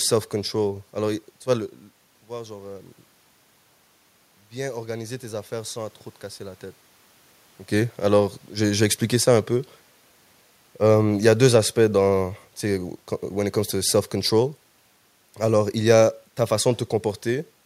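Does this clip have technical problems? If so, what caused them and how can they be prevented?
Yes. From 4.52 to 6.68 s there is automatic gain rising. The input dropped by about 15 dB, and the gain control slowly added about 3 dB, so the voice and the room noise swell together. A waveform shows a gradual envelope ramp, and a spectrogram shows the noise floor brightening across all frequencies. Fixing the input gain, or disabling automatic gain control, prevents it.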